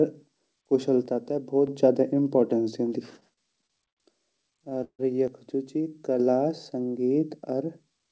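Speech, carried over a WebRTC call path whose band stops at 8 kHz, which fits G.722 at around 64 kbps, with two kinds of fault. From 1.06 to 1.67 s and again from 5.28 to 6.20 s the level falls abruptly by about 6 dB and snaps back just as sharply. The likely cause is one channel dropping out before the mono sum. A fade or gain ride would slope, but this is a clean step of exactly half the amplitude. Repeated stalls (stutter) run from 3.20 to 4.00 s, with six short hiccups filling 21% of the span, the longest 72 ms. They return from 4.37 to 5.02 s, with eight, the longest 148 ms, covering 34%. Each time the jitter buffer ran dry and the receiver stretched the last sound, fading it in the longest waits. Unlike packet loss, nothing is skipped. The sound drags and lurches, then carries on intact.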